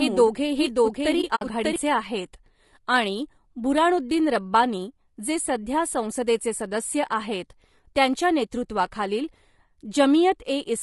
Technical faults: low-delay AAC compression; doubled audio track; AAC frame loss with muting

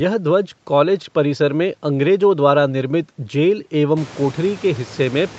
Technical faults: none

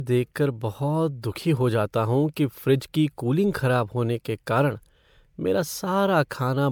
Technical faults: generation loss

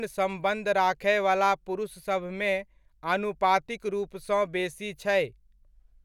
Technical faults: none

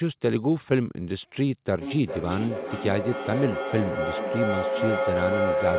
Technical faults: feedback howl

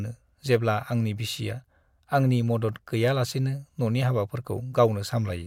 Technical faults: none

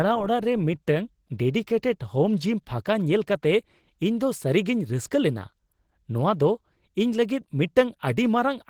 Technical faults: Opus compression

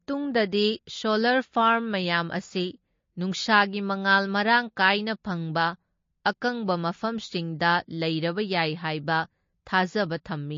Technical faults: MP3 compression

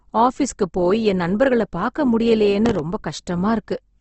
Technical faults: Opus compression; processor overload crackle

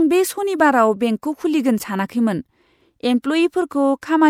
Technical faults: corrupt frame decoded

